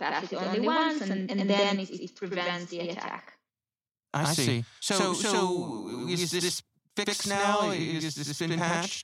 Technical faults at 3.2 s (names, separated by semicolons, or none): channel delay (doubling)